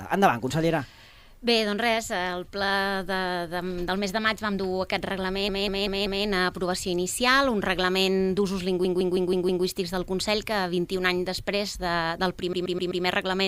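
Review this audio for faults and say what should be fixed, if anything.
Repeated frames stutter at 5.49–6.26 s (a 192 ms block replayed four times), 8.85–9.65 s (160 ms, five times) and 12.53–13.04 s (128 ms, four times). A run of compressed frames was duplicated, so the same slice loops and the audio grows longer. On a spectrogram this appears as identical tiled patches. Prevent it by deduplicating frames by sequence number or timestamp before decoding.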